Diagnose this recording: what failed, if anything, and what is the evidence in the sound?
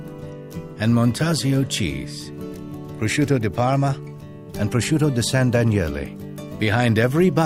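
Nothing in the sound points to a failure at any stage of the chain, so there is no evidence to cite and no mechanism to diagnose.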